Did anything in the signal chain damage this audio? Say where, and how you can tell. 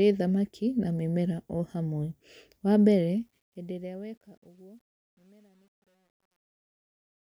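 Yes. The damage is truncation distortion on a fade, introduced at a sample-format conversion or gain stage. The speech fades out from around 3 s to the end at 7.35 s. From 2.94 s the decaying level turns grainy. From 4.18 s to the end the tail is at its grittiest. The fade was computed with too few bits and no dither. The grit suggests roughly 10-bit resolution, so the quiet samples collapse into coarse square steps.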